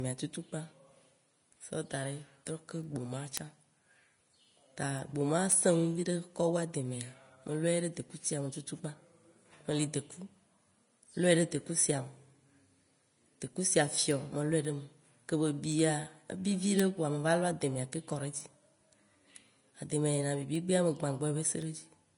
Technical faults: Vorbis compression; word clock ticks

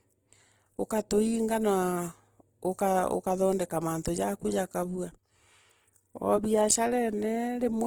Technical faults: Opus compression

